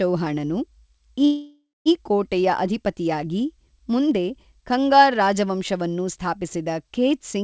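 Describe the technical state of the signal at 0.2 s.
At 0.2 s the speech is intact, carried through a G.722 call path that leaves nothing above 8 kHz, with no fault present at that moment.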